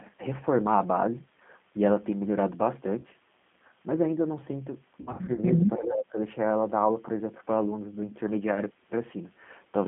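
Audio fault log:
Throughout: G.729 codec. The sound is narrow, slightly rough and synthetic, with clearly audible coding damage. The band is confined to roughly 150 Hz to 3.5 kHz, with nothing audible above that. This fits G.729A at 8 kbit/s. The codec rebuilds each short frame from a vocal tract filter, a pitch predictor and a handful of pulses rather than keeping the actual waveform. That approximation produces the buzzy, coarse texture.
2.99–3.07 s and 5.01–5.40 s: VoIP packet loss concealed by the speech codec. At 2.99 s a brief stretch turns into a smeared, buzzy continuation that lasts about 30 ms, which points to one lost packet. From 5.01 s the damage repeats in bursts over about 360 ms. About 180 ms is missing in total, and the longest gap is 60 ms. In each gap the decoder stretched its last pitch and filter while fading the level. Because each frame builds on the previous one, the sound stays weak and distorted for a moment after the audio resumes.
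5.78–6.17 s: speech suppressed in double talk. The level dips sharply, by about 20 dB at its deepest, and the sound thins and breaks up for roughly 0.4 s. The likely cause is an echo canceller that could not separate this talker from echo of the far end speaking at the same time, so it turned down everything.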